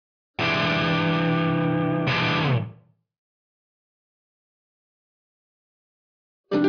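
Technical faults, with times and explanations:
Nothing stood out on listening to this audio.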